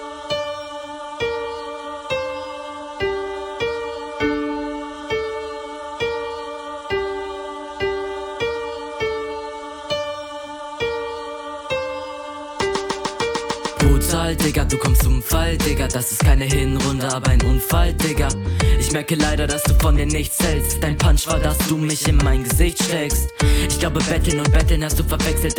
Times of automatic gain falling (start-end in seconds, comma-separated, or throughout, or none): none